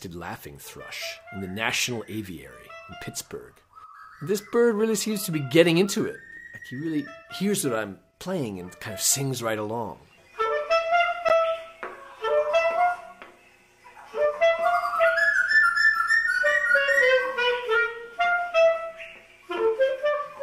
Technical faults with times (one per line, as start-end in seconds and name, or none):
11.29-11.32 corrupt frame decoded
15.03 corrupt frame decoded